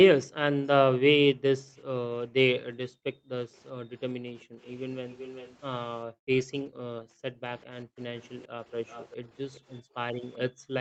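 Between 1.32 and 1.76 s, and again from 2.8 to 4.58 s, the echo canceller clamps the microphone while the far end is playing, so the background is gated. The room sound drops by about 40 dB in brief dips totalling a few hundred milliseconds, then comes back.

From 4.62 to 5.57 s there is an echo leak. The likely cause is a loudspeaker on the far side whose echo canceller failed to remove everything its microphone picked up. It is heard as a faint copy of the speech arriving 388 ms late, about 20 dB below it.

Gating returns from 6.06 to 7.97 s, with roughly a second of dropouts near 40 dB deep. From 7.61 s to the end the echo leak reappears at the same 388 ms delay, now about 25 dB down. A final gated stretch between 9.81 and 10.69 s pulls the background down by about 33 dB.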